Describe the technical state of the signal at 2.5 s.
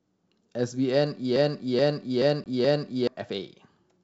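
At 2.5 s the signal sits inside a broken-record loop running from 1.36 s to 3.07 s. A 0.43 s stretch of speech plays four times back to back, most likely because the player or stream stalled and kept resending the last fragment it held. The audio meant for that span never arrives. On a spectrogram the same block of harmonics and formant shapes repeats at exact 0.43 s intervals. The waveform shows identical envelopes tiled end to end, with a seam at each joint.

The moment also falls just after packet loss on an ADPCM call, a hard gap from 2.44 s to 2.47 s where roughly one packet of about 20 ms was replaced by silence. Once the gap ends, the decoder's predictor and step size no longer match the sender's. Sound resumes slightly distorted, and the distortion settles within tens of milliseconds. The waveform shows a flat, sharp-edged hole. On the spectrogram this appears as a blank vertical strip.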